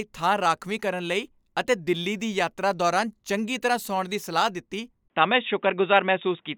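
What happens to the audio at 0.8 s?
Nothing goes wrong at 0.8 s; the speech runs on intact through that moment with no dropout, click, distortion or other fault to be heard.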